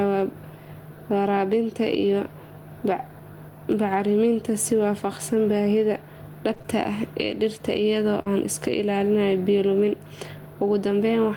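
Gain pumping runs throughout, most likely an overdriven input feeding a fast limiter. The gain swings about 10 dB, seen as a breathing waveform envelope. Short concealed packet loss hits at 6.53 to 6.66 s as three back-to-back 20 ms gaps, then at 8.22 to 8.28 s with 40 ms missing. The receiver fills each gap with extrapolated sound, heard as a brief smear or wobble and shown as flattened, repeated spectrogram bands.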